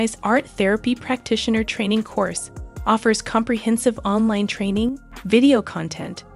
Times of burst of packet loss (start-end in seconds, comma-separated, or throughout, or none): none